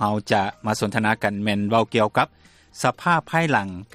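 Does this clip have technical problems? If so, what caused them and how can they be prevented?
No, there are no technical problems to report. Nothing in the sound calls for a cause or a prevention step.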